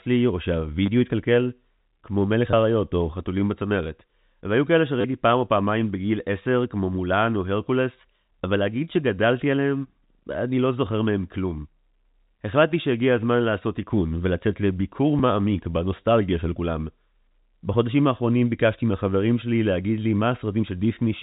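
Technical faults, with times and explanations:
0.86-0.88 s, 2.51-2.53 s, 5.01-5.04 s, 15.19 s: packet loss with last packet repeated. Gaps of 20, 20, 30 and 10 ms were filled by replaying the previous packet, which fits 10 ms packets. The runs at 0.86, 2.51 and 5.01 s make brief robotic stutters, and the single repeat at 15.19 s a small blip.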